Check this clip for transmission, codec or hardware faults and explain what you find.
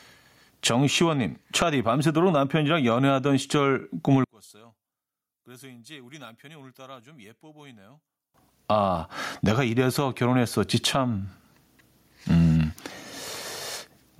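Two faults are audible in this speech recording: level pumping across the whole clip, and a stretch where the sound nearly disappears.

Gain pumping runs from start to finish. The level is pulled down each time the speech gets loud, with a swing of around 15 dB. Loud and quiet passages sit unnaturally close together, so the whole thing sounds squashed and breathing. This is likely input gain set far too high for the microphone, with a fast limiter or compressor clamping down on each peak and releasing in the gaps.

One channel inverted affects the section from 4.24 to 8.34 s. Here the speech drops by about 34 dB when heard in mono, collapsing to a faint residue before returning to full level afterwards. The likely cause is one stereo channel flipped in polarity for that span. The centred speech is common to both sides and cancels almost completely when they are summed, leaving only the small difference between the channels.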